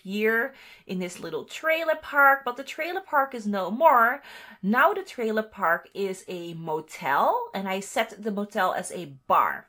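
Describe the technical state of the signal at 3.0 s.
At 3.0 s the signal carries crude rate conversion, present throughout the clip rather than at that moment alone. The sound points to a step from 32 kHz up to 48 kHz done by nearest-sample picking: every two input samples become three output samples by repeating one, with no interpolation filter. That 3:2 repeat pattern adds an error roughly 25 dB below the signal, heard as a gritty, inharmonic fizz riding on loud and high-frequency content.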